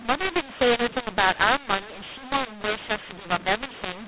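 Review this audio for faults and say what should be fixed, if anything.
The speech has a mu-law and A-law mixed up fault for its whole length. Samples written with A-law are being read back as mu-law, so every level is mapped through the wrong logarithmic curve. Some peaks are inflated, others squashed, and near-silent samples jump well above the floor. The result is harsh, gritty distortion on the words while pauses fill with hiss. On a waveform the envelope looks ragged and the gaps never settle to a flat line. On a spectrogram broadband noise smears across every pause, all under the telephone band's ceiling at 4 kHz, which fits ordinary 8 kHz A-law coding. Fix the decoder so it uses the same G.711 law the encoder used, ideally by carrying the law explicitly in the stream or session setup rather than assuming it.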